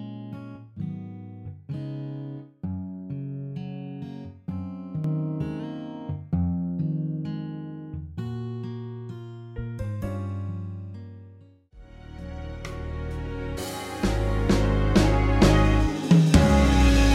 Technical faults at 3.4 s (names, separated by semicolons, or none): none